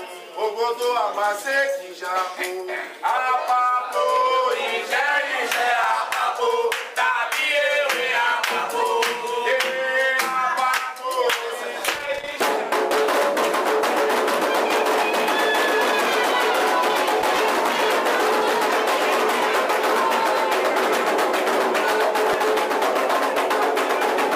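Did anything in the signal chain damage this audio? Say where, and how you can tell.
Yes. Repeated buffer at 5.84 s and 22.33 s, a driver or buffer-stage fault. Fresh samples didn't reach the output in time, so the device replayed the block it already held. At 5.84 s a block of about 5 ms plays once extra. At 22.33 s the same size block plays twice extra. Each repeat butts against the last with a hard join, so these register as tiny clicks or a brief buzz. Around 5 ms and 10 ms of real audio are lost at each point.

Loose connector crackle from 11.85 to 12.34 s and from 17.20 to 17.37 s, a fault in the analogue wiring ahead of the converter. A worn or dirty contact is making and breaking rapidly, chopping the signal on and off many times in quick succession. That produces an irregular burst of scratchy crackle lasting roughly half a second in the first stretch and under a fifth of a second in the second. 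The uneven texture points to a physical contact rather than anything digital.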